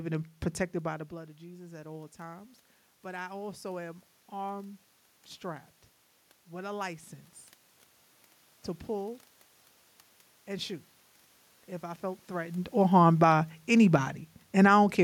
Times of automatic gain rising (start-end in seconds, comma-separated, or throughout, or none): 0.84-4.85